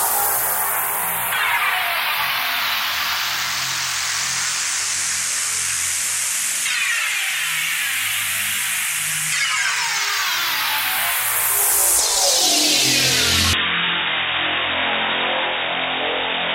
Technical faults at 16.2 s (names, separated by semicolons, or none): input switched to a poorer device